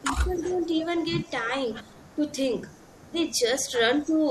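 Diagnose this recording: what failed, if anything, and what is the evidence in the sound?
The failure is in call processing, specifically the echo canceller. A faint delayed copy of the speech trails the talker from 0.0 to 1.02 s, 1.82 to 2.16 s and 2.56 to 3.97 s, each time about 297 ms behind and roughly 25 to 30 dB down. This echo leak likely comes from a far-end loudspeaker feeding its microphone, with the canceller not fully subtracting that pickup before sending it back.

The same stage also shows speech suppressed in double talk. The talker's level dips while the far side is active: across about 0.7 s of the stretch from 0.02 to 1.18 s, dropping by around 10 dB at worst; briefly at 2.16 to 2.22 s by around 5 dB; and again at 4.05 to 4.14 s by around 10 dB. The likely cause is the canceller failing to tell near-end speech from loudspeaker echo and attenuating both together.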